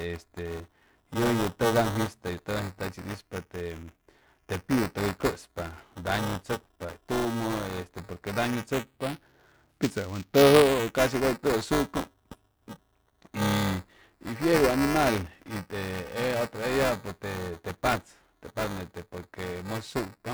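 Throughout the speech runs buffer tearing: writer and reader of the ring buffer overlap each period, splicing roughly a tenth of stale audio, about 10 ms old, between hard joins. It sounds like a robotic 345 Hz buzz, which fits a 128-sample buffer, and shows as evenly spaced vertical spectrogram lines and waveform discontinuities.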